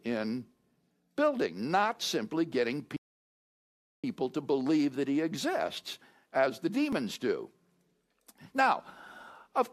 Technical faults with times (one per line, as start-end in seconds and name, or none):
2.96-4.04 playback stall
6.93 overlap between stream segments